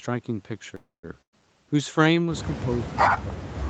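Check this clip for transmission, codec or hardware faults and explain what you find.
Three faults stand out in this speech, all from the call chain.

From 0.75 to 1.05 s there is a call audio freeze, likely from packets held up in transit. The jitter buffer ran dry. The last sound is stretched for about 280 ms, with roughly 160 ms near silence. Then speech resumes where it stopped, with nothing lost.

From 1.21 to 1.42 s comes a burst of packet loss. About 120 ms of speech never arrived. The receiver filled about 110 ms by extending the last sound and fading it, including about 80 ms of silence. Speech then jumps ahead past the gap.

From 2.68 s to the end, speech is suppressed in double talk, likely because both sides spoke at once. The echo canceller could not separate talker from echo. It pulled the level down hard, at worst by about 40 dB, under the band-limited Opus sound.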